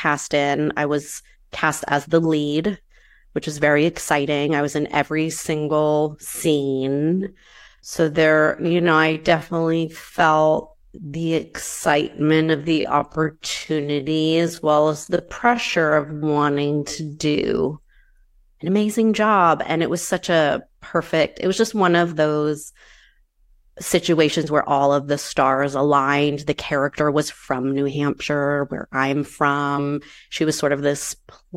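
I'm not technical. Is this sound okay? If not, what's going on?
No. From 6.31 to 17.53 s the speech suddenly slows to about 0.59 times its pace while the pitch stays the same, so it drags. This is a time-stretched section, likely from software lengthening the audio by repeating tiny slices.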